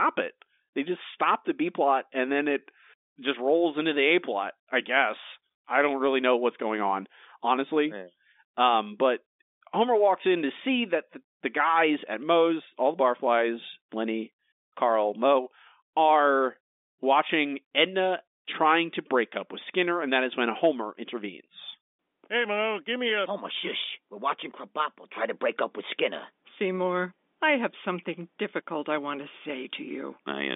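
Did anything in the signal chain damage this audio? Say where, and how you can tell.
No, nothing in the chain has hurt this speech; it's simply been carried as ordinary G.711 telephone audio, so it sits in the usual narrow phone band of roughly 250 Hz to 3.6 kHz, which fits a standard 64 kbps mu-law line.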